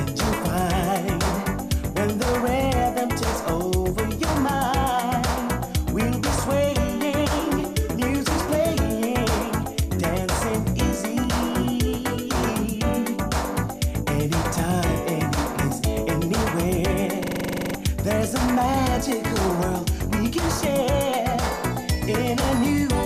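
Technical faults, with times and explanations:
17.24–17.75 s, system hang loop: the system froze while the hardware kept replaying one 42.67 ms slice, which fits a 2048-sample buffer, twelve times in a row. At 23.4 Hz that gives a rattly machine-gun stutter, and about half a second of real audio is lost.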